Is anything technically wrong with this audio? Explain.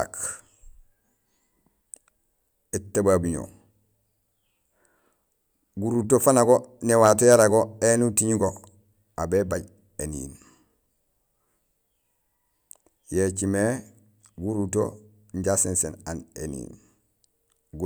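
No, nothing technically wrong turns up in this speech recording, so there's nothing here to flag.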